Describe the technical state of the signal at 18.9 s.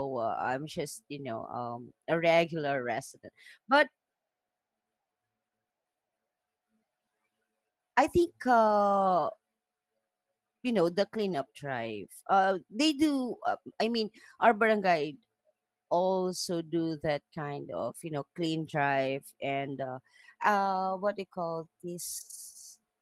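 At 18.9 s the speech signal is intact, with no fault present at that moment.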